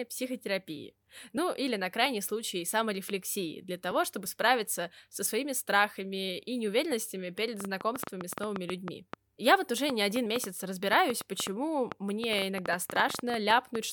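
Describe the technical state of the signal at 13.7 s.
At 13.7 s the signal is inside a train of clicks that runs from 7.60 s to 13.76 s, ending just after this point. Some forty similar clicks arrive at uneven intervals, about 6.5 per second, heard as popping over the speech and in its pauses. They likely come from interference or a faulty connection or power supply. They rise well above the speech, around 15 dB. On a waveform they appear as thin spikes, and on a spectrogram as full-height vertical lines.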